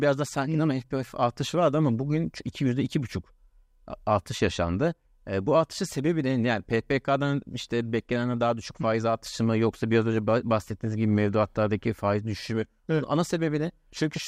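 No technical faults can be heard at any point in the recording, and the signal holds steady throughout.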